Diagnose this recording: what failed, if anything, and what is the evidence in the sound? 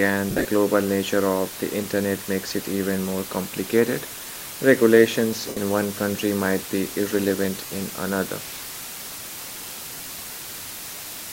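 The whole clip sits on a constant, even hiss with no grinding or distortion. That's low bit depth with dither, and the problem is in the sample-format conversion. The speech has been cut down to 6 bits, with dither added before rounding, so the rounding error becomes steady white noise instead of crunchy distortion. At that depth the noise is only around 10 dB below the speech, which is why it's so prominent throughout.

The second fault is lost LE Audio frames, which puts it in the wireless link. The first burst runs from 0.30 to 0.47 s: about 120 ms of gaps spread over 165 ms, with the longest stretch around 50 ms. The others are at 5.48 to 5.57 s (82.5 ms) and 7.66 to 7.70 s (37.5 ms). In each gap, the LC3 decoder reuses the last spectrum with randomised signs, so the speech smears into noise and fades toward silence when the gap runs long. The durations fit 7.5 ms frames. Under all of this, the light codec compression leaves only a faint trace.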